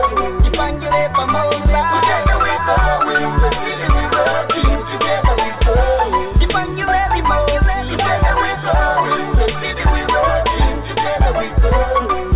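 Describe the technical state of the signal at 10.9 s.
At 10.9 s the signal is intact, with nothing above 4 kHz as expected from a narrowband call path that fits G.711 mu-law coding, and no fault present at that moment.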